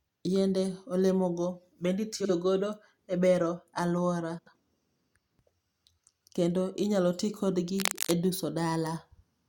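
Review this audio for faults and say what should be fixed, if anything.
Frames out of order show up twice: right after "olemogo bende" at 2.20–2.30 s, and again at 4.38–4.56 s. Each time two neighbouring chunks swap places, about 43 ms each the first time and about 85 ms each the second, giving a fluttery garble. Reorder packets by sequence number in the jitter buffer before decoding.

Cable scratch noise runs from 7.79 to 8.13 s. It's a dense, ragged rustle sitting only a little below the speech, likely from a worn cable or connector being moved. Replace or reseat that cable and keep it still while recording.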